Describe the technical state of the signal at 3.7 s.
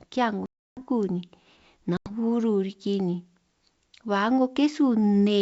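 At 3.7 s the speech is intact, carried through G.722 wideband telephone coding at 64 kbit/s with no fault at that moment.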